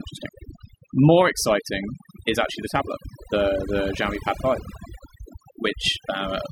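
Across the whole recording the background is pulled down and flecked with twinkling specks. This is overdone noise removal: a noise reducer set too aggressively shuts off individual frequency bands near its noise estimate, taking quiet vocal detail with them.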